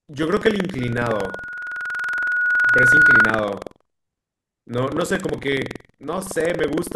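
Throughout the speech, buffer tearing produces a rattling 21.5 Hz buzz, which fits a 2048-sample buffer. A small slice of each period repeats audio roughly 150 ms old, visible as regular hard discontinuities in the waveform.

From 0.80 to 3.44 s, a loudspeaker feedback squeal at 1.4 kHz swells over about two seconds to roughly 10 dB above the speech, drawn as a bright horizontal line on a spectrogram.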